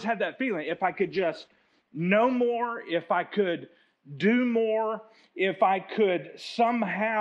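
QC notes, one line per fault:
0.67–3.43 s, call bitrate drop: audio turns rough and muffled, fitting a fall from 64 to 19 kbps; spectrogram shows the high band cut away for about 1.2 s.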